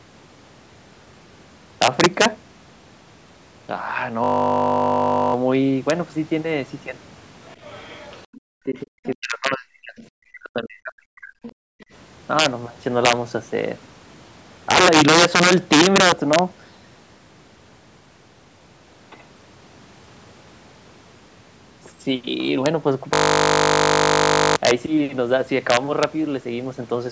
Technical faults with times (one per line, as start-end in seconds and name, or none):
0.00-27.11 integer overflow
4.24-5.34 system hang loop
7.49-8.40 other side's voice leaking through
8.47-11.43 speech suppressed in double talk
9.99-10.06 other side's voice leaking through
11.43-11.52 other side's voice leaking through
11.71-11.86 background gated by the echo canceller
23.14-24.56 system hang loop